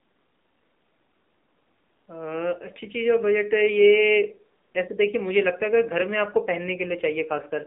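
From the first moment to the last, this speech has been through an AMR narrowband mobile codec, the old 2G/3G phone coder. Everything sits in a band of roughly 200 Hz to 3.7 kHz, so there's no low warmth and no air on top. At a low rate, sounding like about 7.4 kbps, the vocal-tract model plus a few pulses per subframe can't keep up, and the voice comes out audibly buzzy and synthetic.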